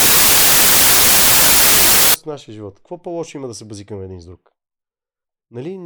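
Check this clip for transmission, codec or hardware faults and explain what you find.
One fault affects the opening of this speech clip: samples built from the wrong bytes, from the start to 2.14 s, ending just before "от нашия живот". The reader is assembling each sample from mismatched bytes, so the rapidly varying low-order bits land in the high-order position. The result is loud, harsh broadband noise, close to white on the louder sounds.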